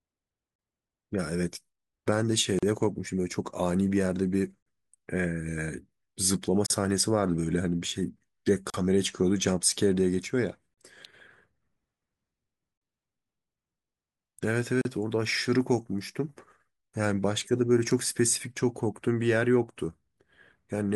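Speech with gaps at the joins of encoded pieces: short silences of about 30 to 38 ms open at 0.56, 2.59, 4.63, 6.66, 8.70, 10.74 and 14.81 s, spaced about every 2 s. Separately encoded segments were joined without trimming encoder delay and final-frame padding.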